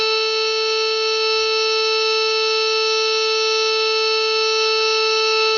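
From start to end the music sounds dull and closed in, with nothing above about 6.9 kHz, and a rough, fluttering noise hangs around sustained tones. This is heavy damage of the kind left by Dolby Digital compression, likely at a bitrate of about 32 kbps. At that rate the encoder cuts the upper band and gives many frequency lines no mantissa bits, so the decoder fills those gaps with dither noise, producing the grainy shimmer.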